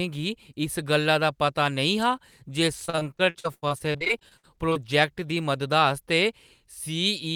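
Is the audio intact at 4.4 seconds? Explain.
No. 4.4 s falls inside a stretch of repeated packet loss from 2.85 to 4.85 s, where lost packets leave about 22 holes, the longest 81 ms. Each is patched by extending the last sound, giving choppy audio with pieces missing. A spectrogram shows smeared, frozen frames broken by abrupt vertical edges.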